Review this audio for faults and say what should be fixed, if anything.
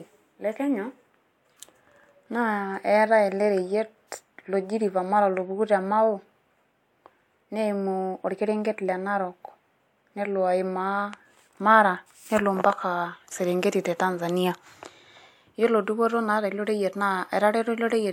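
Nothing in the recording calls for a fix. No faults turn up anywhere in the speech, so it can stay as it is.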